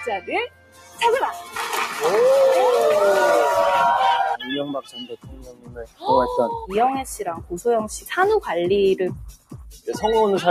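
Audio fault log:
Throughout: noise suppressor applied to music or sounds. A processor tuned for speech is treating this sound as noise. It tracks what stays steady and pulls it down, while sharp onsets pass. The level keeps swinging by roughly 15 dB as the processor acts and releases. Held parts and decays sag, then recover on the next attack. The result is a pumping, fluttering quality, and the sound loses body and space between hits.
0.00–1.01 s, 1.37–1.56 s, 4.34–4.50 s, 4.68–6.06 s, 7.37–7.52 s, 9.30–9.87 s: sound cut by the noise suppressor. In each of these stretches the processor judged the sound to be noise and pushed it down harder. The deepest drops reach about 19 dB at the start and at 4.68–6.06 s, and about 18 dB near the end. The shallowest is about 7 dB at 1.37 s. Sustained material sinks or fades early.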